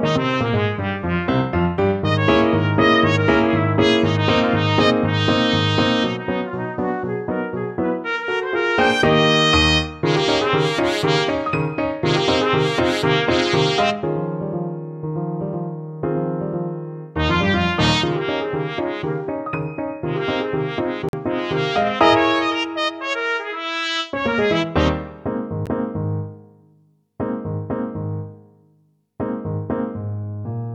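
At 21.09 to 21.13 s the sound drops to dead silence for about 45 ms, then resumes, and a shorter 12 ms dropout follows at 25.66 s. Both are likely Bluetooth stalls, where delayed packets let the receiving buffer run empty. Waveform and spectrogram show clean, full-band gaps.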